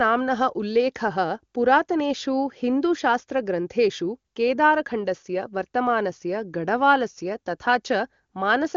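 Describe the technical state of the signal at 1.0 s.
At 1.0 s the speech is intact, carried cleanly through AMR wideband (HD Voice) coding at its top rate of 23.85 kbit/s.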